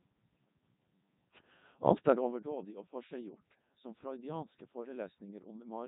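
From the start, the speech runs through a Codec 2 vocoder, which fits a 3.2 kbit/s mode. The voice is rebuilt from sine waves, so it sounds robotic and buzzy. Nothing remains above 3.8 kHz.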